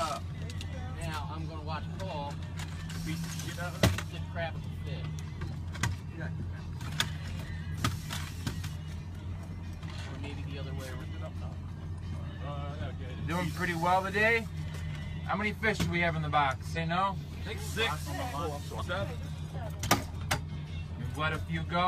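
At 4.51, 7.71, 10.96, 16.72 and 18.77 s there are short bursts of damaged data in the compressed stream, each about 55 ms long. Corrupt bytes there throw the decoder off its frames until it resyncs, so each one comes out as a brief glitch.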